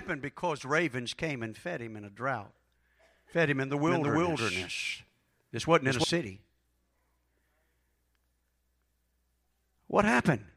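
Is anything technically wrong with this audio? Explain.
Yes. From 3.88 to 6.04 s, just after "fed him in the", the speech shows a doubled audio track. A second full-band copy runs about a third of a second behind, at roughly the same level. It is likely caused by a second capture path or an edit holding two copies out of step. There is no decay or room colour. The copy starts and stops abruptly, so each syllable is heard twice.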